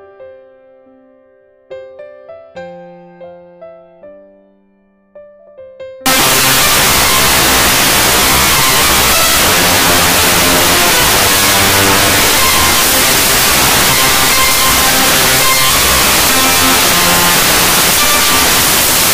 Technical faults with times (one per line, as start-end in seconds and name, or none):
6.06-19.14 samples built from the wrong bytes